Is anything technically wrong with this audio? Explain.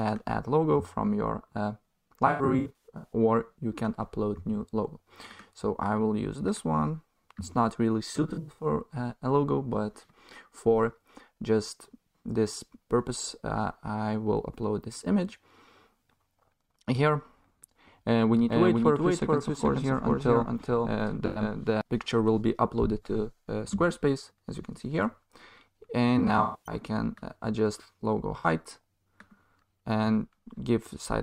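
Yes, there are two kinds of fault.

AAC frame loss with concealment occurs at 2.27–3.13 s, 8.15–8.66 s, 21.26–21.42 s, 26.18–26.75 s and 28.38–28.46 s. Coded frames went missing, and the decoder patched each gap by reusing the last good spectrum with its phase scrambled or energy interpolated. The two longest spans lose about 470 ms and 300 ms in bursts scattered across about 850 ms and 550 ms. Each sounds like a smeared, noisy, phasey blur. The last two losses are brief glitches.

A doubled audio track runs from 18.49 to 21.81 s. A second full-band copy of the sound trails the original by around 400 ms at roughly 5 dB lower. It is likely caused by the signal being captured again through a slower path. The copy has no reverberant decay or room colour, so it sounds like a flat repeat rather than an echo. It switches on and off abruptly at both ends.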